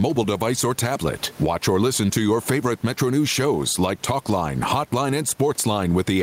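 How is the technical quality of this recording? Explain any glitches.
Gain pumping runs through the whole recording. The input gain was likely set far too high for the microphone, so a fast limiter clamps down on every loud syllable and releases in the pauses. The room background sits about 33 dB below the speech, and the gain swings by roughly 10 dB, leaving the speech squashed and flat in level.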